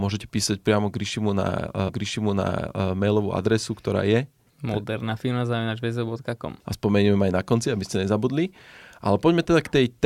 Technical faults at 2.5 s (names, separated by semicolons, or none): stream segment repeated